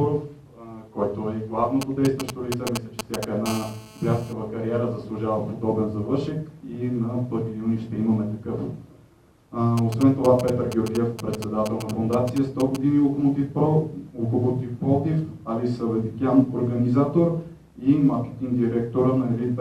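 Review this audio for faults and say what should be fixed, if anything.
GSM signalling bursts appear from 1.82 to 3.25 s and again from 9.78 to 12.77 s: a galloping dit-dit-dit of short raspy buzzes, only slightly below the wanted sound in the first stretch and somewhat lower in the second. A nearby 2G phone is exchanging short radio bursts with the network, and the audio circuitry rectifies them into audible pulses repeating at 217 Hz. On a spectrogram they show as clumped vertical stripes with a comb of harmonics stacked on 217 Hz. The waveform shows grouped spiky packets. To prevent it, keep phones away from the recording chain or switch them to airplane mode.

GSM phone buzz runs from 3.46 to 4.33 s as a steady, hard 217 Hz buzz at about 14 dB below the wanted sound, with no relation to it. Here the phone is transmitting in regular bursts 217 times a second, as during a call, so the rectified bursts form an unbroken rasp instead of scattered groups. 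A spectrogram shows evenly spaced horizontal lines at 217 Hz and its many harmonics for the whole stretch. The waveform carries a regular train of pulses. To prevent it, move any active phone well away from cables and preamps, or use shielded, balanced connections.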